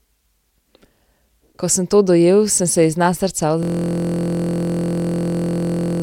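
At 3.63 s the speech freezes into a system hang loop that lasts to the end. The machine stalled while the audio hardware kept replaying one 23.22 ms block, which fits a 1024-sample buffer. It repeats about a hundred times, giving a steady 43.1 Hz buzz.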